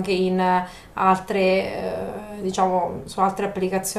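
No technical fault can be heard anywhere in the speech recording.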